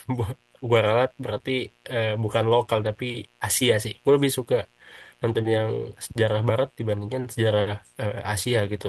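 A mains buzz at 60 Hz runs through the whole speech clip, roughly 40 dB below the voice. Sharp switching spikes, from something like a dimmer or rectifier, repeat twice per mains cycle, giving a raspy, steady tone. On a spectrogram it shows as evenly spaced horizontal lines at 60 Hz multiples climbing into the kilohertz range. The call audio itself tops out near 12 kHz, as the Opus path passes it.

Short concealed packet loss occurs twice, from 1.37 to 1.41 s and from 3.59 to 3.63 s. Each time a gap fitting one 20 ms packet was patched by stretching the preceding sound, which is heard as a brief smear or wobble. The spectrogram shows a short, blurred stretch.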